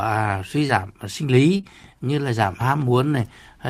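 A speech clip with short concealed packet loss: about 20 ms of audio arrived too late at 0.67–0.71 s, and again in two back-to-back gaps at 1.57–1.65 s. Each gap was patched by extending the preceding sound and crossfading out, leaving a brief smear or wobble, the later two just before "như là giảm".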